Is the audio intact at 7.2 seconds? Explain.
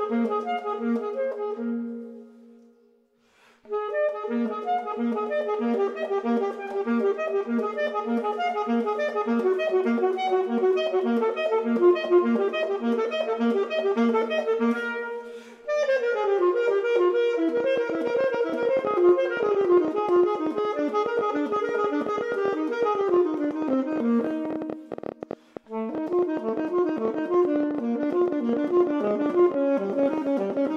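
Yes, the audio is intact at 7.2 seconds, with no dropout, click, distortion or other fault at that point.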